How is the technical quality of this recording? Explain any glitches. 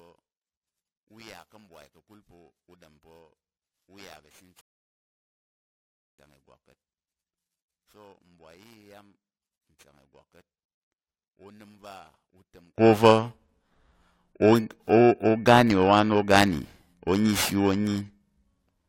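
The recording has real problems: a rough edge that runs the whole way through, a collapse of the speech for the first part, and one dead stop partway in.

The rough edge is periodic clock jitter. Something is wobbling the converter's sample clock at a steady rate of around 2 kHz, so every component of the speech picks up sidebands spaced that far above and below it. The higher frequencies get hit hardest. You hear it as a grainy, metallic fringe on the voice that drops away in the pauses.

From the start to 12.78 s the speech sinks by about 30 dB and turns faint. That points to one channel inverted, likely, with the listener hearing it summed to mono. The centred voice is identical in both channels, so flipping one side's polarity makes the two copies cancel. What survives is only the small difference between the channels, a faint leftover of the speech.

At 4.61 s there's a rebuffering stall. 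The audio cuts to silence and picks up again at 6.19 s exactly where it left off. The player ran dry of downloaded data and waited for more to arrive, so nothing is missing, but about 1.58 s of dead air gets inserted into the timeline.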